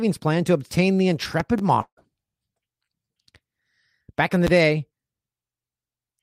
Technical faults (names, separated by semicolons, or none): loud pop; long network dropout